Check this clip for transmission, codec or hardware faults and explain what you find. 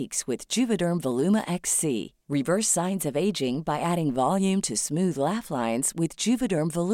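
One fault: clock drift buffer slips, 0.51 to 6.58 s, about ten regular clicks every 0.61 s. Clocks differing by a few hundred ppm likely force small sample drops or repeats.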